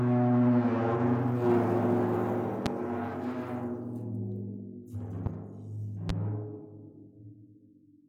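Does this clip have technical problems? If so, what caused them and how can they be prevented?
Yes, there are three loud pops, at 2.66–2.69 s, 5.26–5.29 s and 6.09–6.12 s, peaking about 20, 10 and 15 dB above the sound, which continues underneath. Each is likely a voltage spike from a switch, connector or static discharge. Secure connections, ground the equipment and avoid switching during recording.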